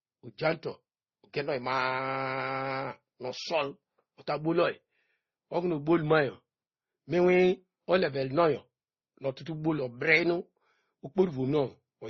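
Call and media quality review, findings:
Transcoding between lossy codecs, likely MP3 then Opus: throughout. Sound fits a low-rate MP3 re-encoded near 32 kbit/s. Second codec spends bits on first codec's smearing, adds its own. Nothing above 6.7 kHz; dull, swirly speech.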